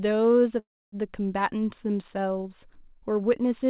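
At 0.59 s the speech halts. A short fading buzz trails off into about 0.28 s of silence until 0.95 s. This call audio freeze likely comes from delayed packets draining the jitter buffer. Nothing is lost. The speech, band-limited at 4 kHz, resumes 0.33 s late.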